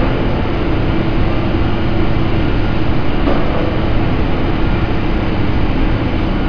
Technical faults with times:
none

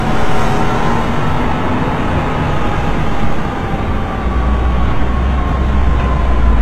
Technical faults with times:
0.00-6.62 HE-AAC compression

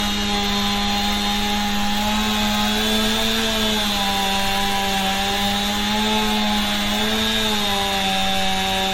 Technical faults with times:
0.00-8.94 generation loss

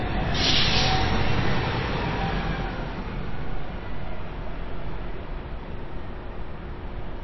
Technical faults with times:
0.00-7.23 MP3 compression

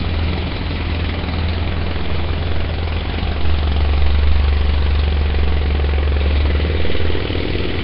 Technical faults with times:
0.00-7.84 Nellymoser compression

